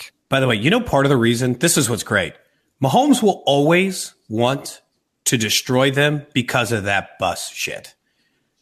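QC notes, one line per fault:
No faults found: the speech signal is continuous and intact from its first sample to its last.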